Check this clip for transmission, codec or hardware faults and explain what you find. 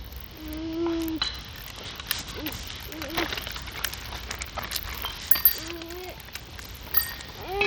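A codec fault runs through the whole recording, with no clean stretch anywhere in it.

Bluetooth SBC compression: the audio was likely squeezed through a low bit pool on the default Bluetooth codec, consistent with a stream of about 80 kbps. With so few bits, the encoder starves its upper sub-bands and quantises the rest coarsely. The damage is plainly audible throughout: the treble thins out and flickers in and out, while a gritty, grainy noise and aliasing cling to the sound.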